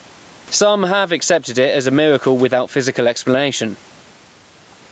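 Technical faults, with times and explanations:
Throughout, gain pumping: the level is pulled down on each loud syllable, a swing of around 15 dB, so the levels feel squashed together. That's likely input gain set way too hot, with a fast limiter clamping it down.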